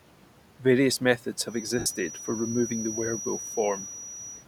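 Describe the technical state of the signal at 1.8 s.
At 1.8 s the speech passes through a noise suppressor, which cuts steady background by about 12 dB between phrases and lets it rise back under them. Unlike a plain noise gate, this works band by band, so the noise changes colour instead of simply switching off.

From 1.43 s to the end there is a steady, thin whistle at 5.8 kHz, well below the speech and swelling and fading slowly in level. This is likely a feedback whistle from a loudspeaker-to-microphone loop held just short of howling. It neither grows nor sweeps, so it is not runaway feedback or an interfering tone.

From 1.79 to 1.86 s, about 67.5 ms, lost LE Audio frames replace the speech with a noisy, smeared copy of the preceding spectrum that starts to fade. The length fits a run of roughly nine short LC3 frames. It sounds like a hissy blur rather than a click or a hard dropout, which sets it apart from a plain packet gap.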